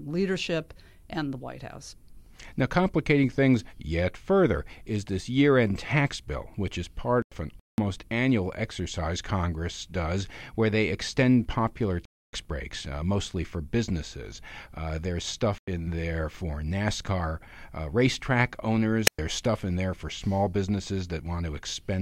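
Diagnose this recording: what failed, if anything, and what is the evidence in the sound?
Codec/storage stage, corrupt frame muted: abrupt digital silences at 7.22 to 7.86 s, 11.60 to 12.33 s and 15.58 to 15.68 s, each spanning whole frame lengths, with timing kept. Unlike a radio dropout, no hiss precedes them.

Codec stage, corrupt FLAC frame: a single brief error at 9.43 s, peaking at about -32 dBFS. Damaged data ran through the decoder's prediction rather than being muted, so it's heard as corrupted sound, not a gap.

Analogue wireless link, wireless microphone squelch dropout: at 19.06 to 19.19 s the radio signal faded, and the receiver's squelch muted for about 110 ms. The rise of hiss around the near-silence distinguishes it from a clean codec mute.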